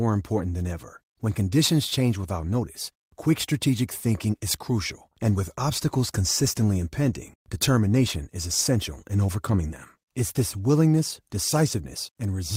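No technical faults turn up at any point in the recording, so there is nothing to describe in time order.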